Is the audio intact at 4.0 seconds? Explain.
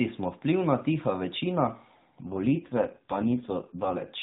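No, an AMR rate drop runs from 2.30 to 4.11 s. The codec fell to a much lower bitrate, which fits 4.75 kbps, so the speech turns rougher and more synthetic without gaps.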